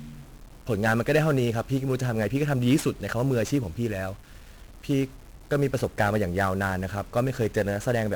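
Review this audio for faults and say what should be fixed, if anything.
1-bit DFPWM compression runs throughout the speech. Each sample steers an adaptive level up or down, leaving heavy fuzzy, crackly noise and hiss-buried treble, consistent with a 48 kbps stream. Encode from the original with a multi-bit codec instead.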